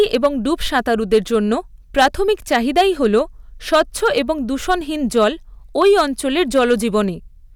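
Hard clipping runs through the whole of this speech recording, from start to finish. The signal was driven about 8 dB past what some stage could pass, so the tallest peaks, around one percent of the waveform, are sliced flat. Those squared-off tops generate harmonics high up the spectrum, and the result is a crackling edge on each louder syllable rather than continuous fuzz, because only the peaks cross the ceiling.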